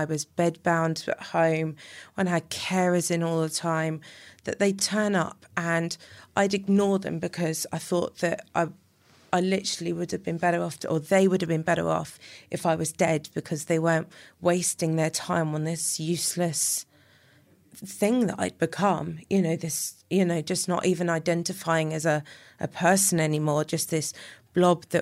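Dropped buffer (overrun) at 13.08 s, between "off if I was" and "because they weren't wasting": a jump as a few milliseconds vanish, likely samples overwritten before being read.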